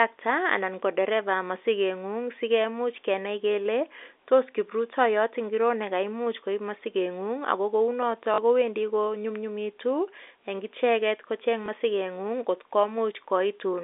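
Speech carried over G.711 telephone coding, confined to roughly 300 Hz to 3.6 kHz, with two packet losses concealed by repeating the last packet. The first runs 40 ms from 8.34 s, which fits two 20 ms packets, and the second lasts 20 ms from 11.66 s. The first sounds like a brief robotic stutter and the second like a small blip. The waveform shows a copied block with abrupt seams.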